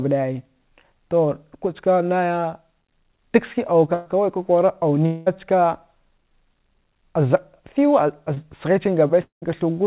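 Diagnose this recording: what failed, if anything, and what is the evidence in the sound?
The network is where this call went wrong. At 3.94 to 4.08 s there's a burst of packet loss: about 120 ms of speech never arrived in time, and the receiver covered it by extending the last sound and letting it sag, so a voiced sound becomes a held, decaying buzz and anything else a fading hiss. When the speech picks up again it's further along, with those 120 ms simply gone. Everything here stays inside the 4 kHz band of the G.711 mu-law path.

Two longer gaps sound like a long network dropout, likely from the link stalling rather than anything local. At 5.06 to 5.28 s about 200 ms is lost, and the concealment stretches the last sound across the whole hole, fading as it goes. At 9.22 to 9.44 s another 200 ms goes missing. This time the fill runs out and you're left with roughly 130 ms of silence before speech resumes further on.

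The smallest one is a short concealed packet loss at 8.34 to 8.38 s. Only about 20 ms of audio went missing, and the decoder patched it by carrying the previous sound forward, then crossfading back into the real stream. To the ear it's a quick smear or wobble. A brief consonant sitting there could vanish.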